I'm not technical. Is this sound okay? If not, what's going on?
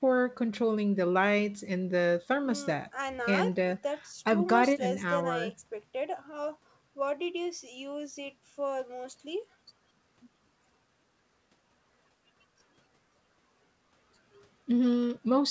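Yes, no faults here; this is speech heard as it comes through a normal call, and the missing content above 8 kHz is simply the ordinary bandwidth of a wideband call connection.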